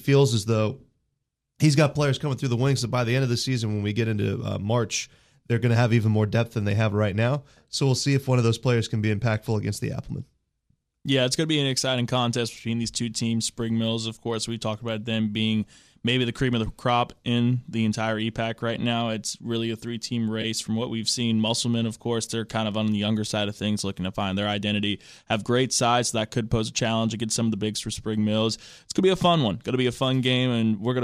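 Speech, with a brief AAC frame loss with concealment between 20.42 and 20.45 s. About 20 ms of signal is missing, which fits two lost short frames. The decoder covers the gap by reusing the last good spectrum, so the sound turns momentarily smeared and noisy rather than dropping out. On a spectrogram, the harmonic lines blur into a thin vertical smudge of noise. The waveform shows a short stretch of irregular texture instead of a gap. The light graininess heard throughout likely comes from low-delay AAC compression at 64 kbps.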